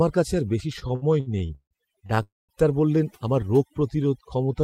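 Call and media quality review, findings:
Overdone noise removal, whole clip. Background pulled to near silence with twinkling specks. Noise suppressor set too aggressive, gating bands near its noise estimate and taking quiet speech detail with them. Spectrogram: dark floor with scattered isolated dots, holes torn in weaker harmonics.

Repeated stalls (stutter), 0.79–2.20 s. Ten gaps, about 413 ms filled in total, longest 159 ms, roughly 29% of the span. Jitter buffer repeatedly starved by late packets, with the receiver extending the last sound each time. Nothing lost, just dragging. Spectrogram: smeared horizontal streaks interrupting speech.

Call audio freeze, 2.23–2.52 s. About 260 ms inserted, the last sound held and fading, then about 190 ms silence before resuming where it stopped. Likely a network hold-up draining the jitter buffer, with delay raised 260 ms. Waveform: decaying tail then flat line.

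Jitter buffer slow-down, 3.70–4.62 s. Playback at 92% speed, about 81 ms added, pitch unchanged, sounds drawn out. Receiver repeating single pitch periods to rebuild its reserve. Spectrogram: formants stretched horizontally, harmonic spacing constant.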